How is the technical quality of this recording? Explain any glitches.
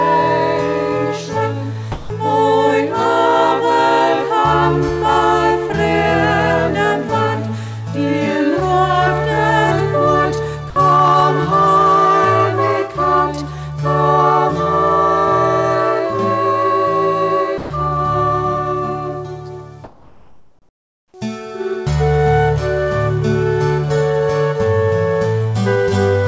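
There are a few short dropouts and one stretch where the background is swapped out. The audio went through a call path, and nothing above about 8 kHz, which points to a wideband codec like G.722.

Sound dropped by the voice detector happens three times: 1.92 to 2.10 s (180 ms), 10.70 to 10.76 s (60 ms) and 17.58 to 17.70 s (120 ms). The sender's detector likely mistook real sound for background and stopped sending. Flat filler noise plays until it triggers again.

Comfort noise in place of the background runs from 19.84 to 21.14 s, about 1.3 s. With nothing being sent, the receiver likely synthesises noise roughly matched to the background. The real ambience turns into a smooth, featureless hiss, about 5 dB quieter, until the sound resumes.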